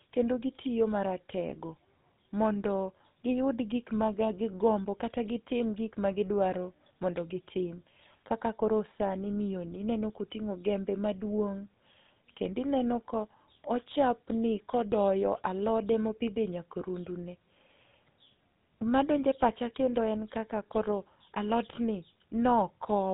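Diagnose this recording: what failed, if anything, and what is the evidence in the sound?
The speech passed through a GSM full-rate codec at the codec stage, and its pulse-driven vocal-tract model leaves a buzzy, gravelly roughness throughout, consistent with the 13 kbps rate. The damage is plainly audible, and nothing survives above about 3.9 kHz.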